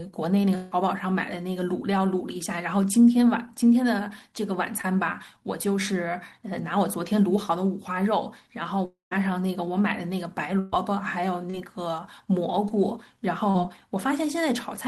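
At 0.55 to 0.73 s a fading buzz or hiss replaces the speech, and the passage resumes further on. This is a long network dropout, likely with about 160 ms of audio lost and the last sound stretched to cover it. At 4.81 to 4.85 s a brief smear passes, a short concealed packet loss in which about 20 ms never arrived and was filled by extending the preceding sound. From 8.85 to 9.13 s a second long network dropout, likely, fades out and leaves about 140 ms of silence. Around 260 ms of speech is gone. At 10.59 to 10.74 s a fading continuation bridges a gap, a burst of packet loss that drops about 140 ms while the receiver turns the continued sound down. Further brief smears at 11.50 to 11.55 s, 12.68 to 12.72 s and 13.50 to 13.56 s are more short concealed packet losses, each hiding 20 to 40 ms of missing audio.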